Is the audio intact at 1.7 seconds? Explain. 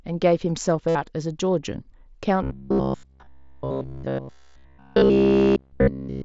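Yes, the speech at 1.7 seconds is intact, with no fault at that moment.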